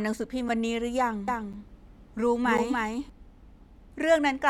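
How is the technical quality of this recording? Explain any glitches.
The recording has two kinds of fault: three short dropouts and a stretch where the speech is doubled.

The first is a block of digital silence, which happens three times: at 0.49 s for about 5.8 ms, then at 1.53 s and 2.58 s for about 8.7 ms each. For those moments the sound cuts out and back with no fade, heard as a quick tick or tiny hole. The first gap's length fits a 256-sample buffer that wasn't filled in time.

The second is a doubled audio track, from 1.28 s to 3.10 s. A second full-band copy of the speech runs about a third of a second behind the original and roughly 5 dB quieter. It isn't room echo, since it has no decay or tonal colouring. It's a clean, flat repeat that cuts in and out abruptly at both ends. The likely cause is the same signal being picked up a second time through a slower path and mixed back in, though an edit that left two misaligned copies would sound the same.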